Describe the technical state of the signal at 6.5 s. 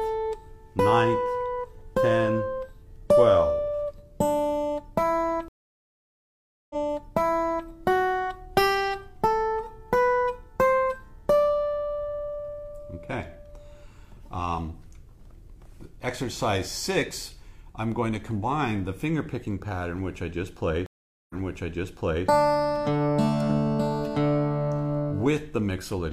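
At 6.5 s the signal lies inside a stream reconnect that spans 5.48 to 7.67 s. The connection dropped, the player stopped output, then re-established the link and restarted its decoder mid-stream. The gap runs about 1.2 s. When the audio resumes, it jumps back roughly 1.0 s, repeating material already heard, which fits the server resending a burst of buffered stream on reconnect.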